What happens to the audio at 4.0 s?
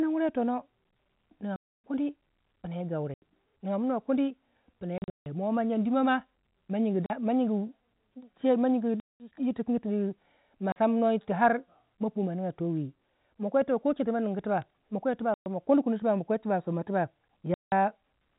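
Nothing goes wrong at 4.0 s: the speech carries straight through that point with the band-limited sound of G.711 telephone coding, its faint level-following hiss, and no dropout, click or other fault.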